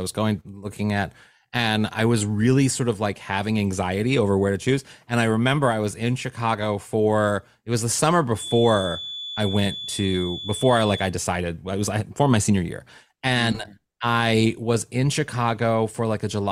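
From 8.32 to 11.14 s, a feedback whistle sits at 3.4 kHz, roughly 10 dB under the speech. It likely comes from a loudspeaker-to-microphone loop ringing just short of a howl.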